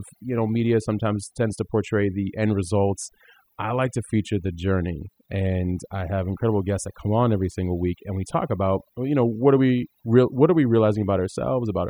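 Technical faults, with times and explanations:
Throughout: overdone noise removal. A noise reduction stage was pushed far too hard on a noisy speech recording. It treats any frequency band sitting near its estimate of the noise as something to cut, so it drives those bands down or off, and the quieter parts of the voice get removed with them. The background drops and breaks up into twinkling specks.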